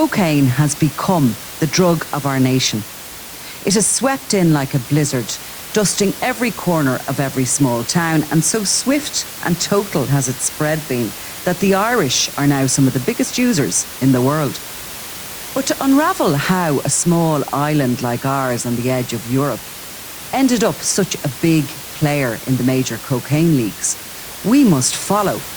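No technical faults are audible in this speech recording; the room's background noise sits about 15 dB below the speech and belongs to the recording environment, not the signal chain.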